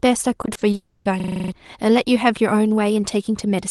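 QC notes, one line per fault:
0.41–0.75 s, repeated packet loss (robotic sound): about five short holes, none longer than 20 ms, each patched by stretching the preceding sound, so roughly 29% of the stretch is synthetic fill. Speech turns choppy. The spectrogram shows frozen, smeared harmonics broken by thin vertical gaps.
0.75–1.07 s, long network dropout: the sound smears into a buzzy continuation of the last moment that fades out, followed by about 10 ms of near silence. About 0.3 s of speech never returns, likely from missing network audio. The waveform shows a decaying envelope and a flat gap.
1.20–1.52 s, system hang loop: one 40 ms slice of audio repeats exactly eight times, producing a rough 25 Hz buzzing stutter in place of roughly 0.3 s of real speech. The waveform shows identical repeating blocks, and the spectrogram shows vertical stripes at a regular 40 ms spacing.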